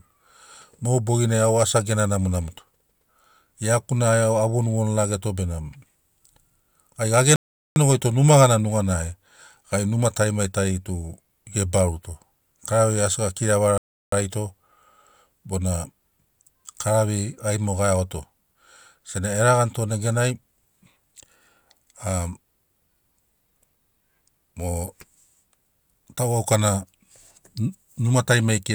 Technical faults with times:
7.36-7.76 rebuffering stall
13.78-14.12 rebuffering stall

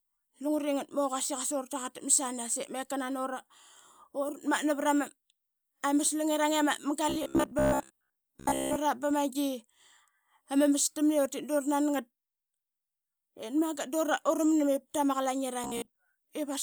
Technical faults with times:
7.09-8.76 robotic sound from repeated short buffers
15.64-15.97 robotic sound from repeated short buffers

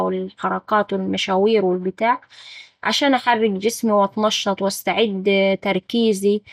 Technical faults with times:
0.00-6.53 MP2 compression

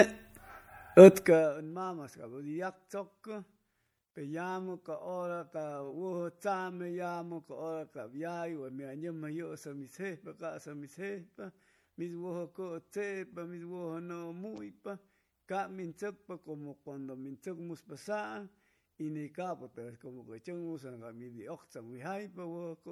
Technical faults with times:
0.00-22.91 MP3 compression

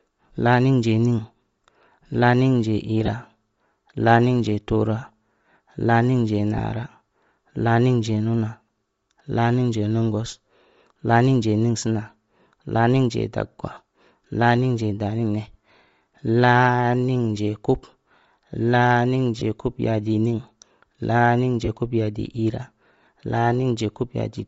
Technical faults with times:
0.00-24.48 Bluetooth LC3 compression
3.06-3.08 lost LE Audio frames
6.58 lost LE Audio frames
13.74-13.77 lost LE Audio frames
19.39-19.42 lost LE Audio frames
21.65-21.69 lost LE Audio frames

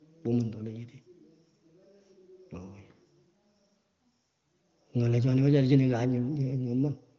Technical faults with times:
none

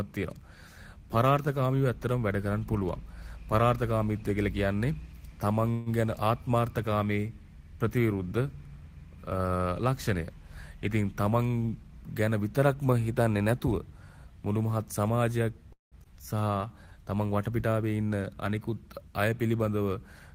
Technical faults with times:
5.71-5.89 call audio freeze
11.31-12.75 jitter buffer speed-up
15.72-15.95 call audio freeze
16.04-16.08 skip ahead
16.15-16.87 jitter buffer slow-down

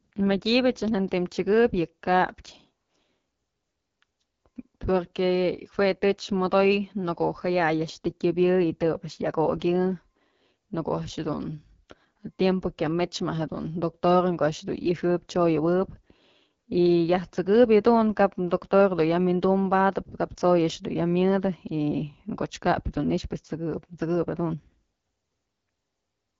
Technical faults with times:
0.00-26.40 AMR wideband (HD Voice) codec

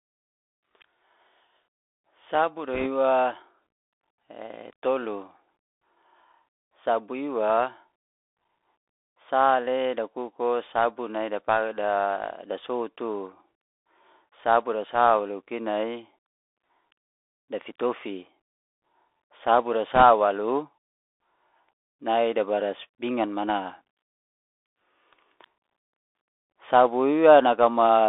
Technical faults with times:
0.00-28.08 Bluetooth CVSD headset codec
2.74-2.87 bit errors on a Bluetooth voice link
19.95-20.03 bit errors on a Bluetooth voice link

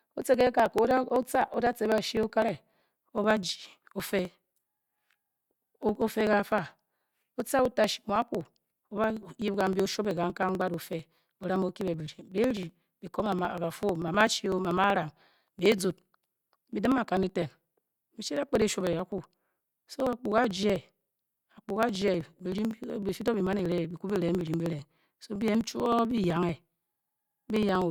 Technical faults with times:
0.09-27.82 periodic USB or driver dropouts

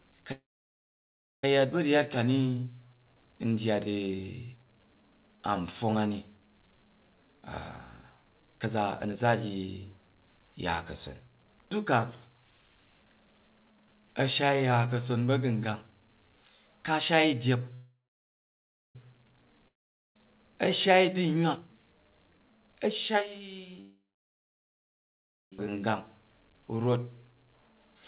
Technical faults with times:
0.32-1.44 call audio freeze
7.10-12.70 jitter buffer speed-up
17.75-18.96 call audio freeze
19.68-20.16 long network dropout
21.36-23.77 jitter buffer speed-up
23.81-25.53 call audio freeze
25.59 skip ahead

